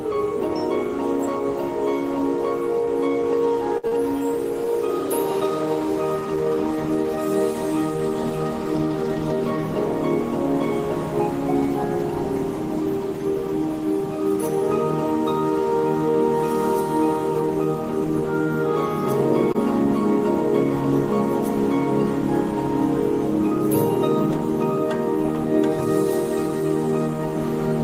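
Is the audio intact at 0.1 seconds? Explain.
Yes, at 0.1 seconds the audio is intact, with no dropout, click, distortion or other fault to be heard at that point.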